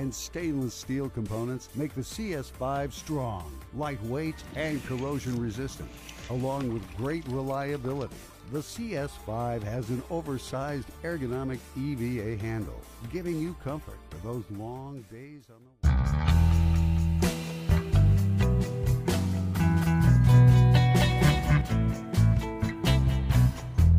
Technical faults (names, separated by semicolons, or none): doubled audio track